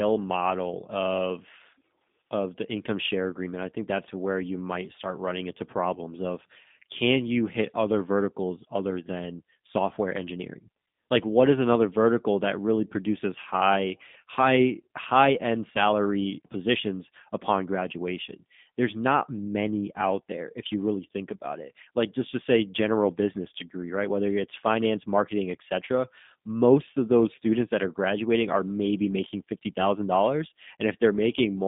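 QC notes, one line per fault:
Throughout, G.729 codec: speech band-limited to 150 Hz–3.6 kHz, with plainly audible rough, synthetic texture from sparse-pulse excitation, consistent with an 8 kbit/s VoIP codec.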